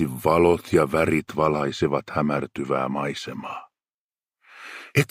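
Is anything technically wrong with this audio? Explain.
Yes. From 1.20 to 4.09 s, channel delay (comb filtering): a roughly two-sample lag cancels around 10 kHz in mono, dulling highs, with a fixed dark spectrogram band.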